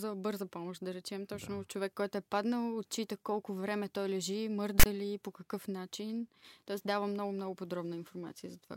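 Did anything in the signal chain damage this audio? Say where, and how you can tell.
Yes. At the storage stage, a block of file tags, meaning text followed by zero padding, was decoded as samples. The result is file tags played as audio: from 4.80 to 4.86 s, between "колко време той лежи" and "ли по какъв начин", a hard-edged, one-sided rasp drops abruptly into silence.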